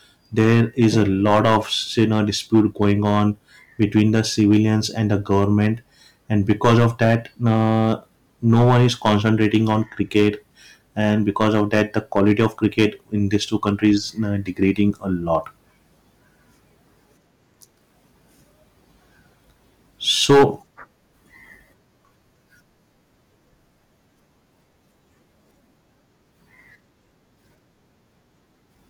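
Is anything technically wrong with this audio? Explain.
Yes. Hard clipping runs through the whole speech clip: the signal is pushed about 12 dB beyond what a stage can pass, so peaks are cut flat. Only a small share of samples, around one or two percent, hit the ceiling, but those flattened tops add high harmonics, heard as crackle and harsh fuzz on louder syllables.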